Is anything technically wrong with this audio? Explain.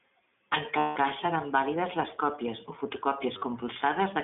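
Yes, two problems. The whole clip has gone through the iLBC codec: narrowband, cut to roughly 200 Hz–3.5 kHz, with a rough, synthetic edge, which fits the 15.2 kbps, 20 ms-frame mode.

There are also lost iLBC frames at 0.78–0.98 s, just before "cas seran vàlides les", and briefly at 3.38–3.44 s. The decoder loops the last pitch cycle with noise, so you hear a held, buzzy vowel that snaps back cleanly.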